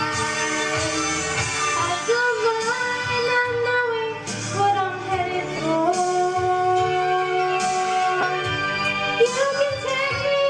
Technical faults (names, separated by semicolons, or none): lost LE Audio frames